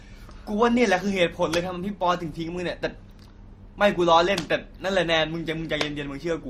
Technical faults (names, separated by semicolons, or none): transcoding between lossy codecs